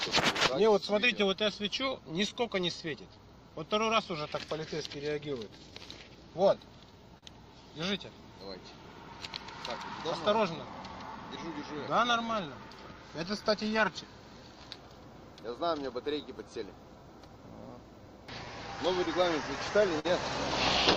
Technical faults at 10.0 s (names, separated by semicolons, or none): clock drift between sender and receiver; repeated timing corrections